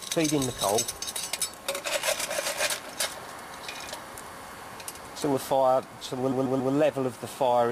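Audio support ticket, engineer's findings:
Repeated frames, 6.31–6.73 s. Stutter: one 139.3 ms stretch of audio plays three extra times, adding 418 ms to the clip. The same compressed frame run was written or sent again; the block length fits a run of about six frames.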